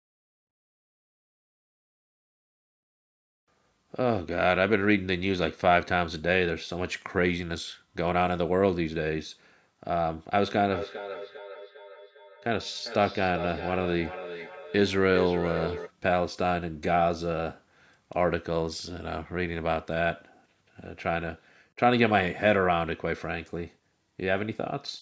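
A speech recording where, from 10.54 s to 15.93 s, each phrase comes back at a steady gap of roughly 0.4 s, each copy thinner and more metallic, the loudest about 10 dB below the direct speech. It is feedback echo between two devices: two devices in the same room share a call, one replays what the other's microphone sent, and that microphone picks the playback up again, which neither device's echo canceller removes. The call microphone processing limits the band to 8 kHz.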